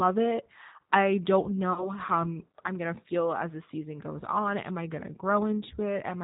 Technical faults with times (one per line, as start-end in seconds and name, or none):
0.00-6.23 G.729 codec
1.73-1.91 VoIP packet loss concealed by the speech codec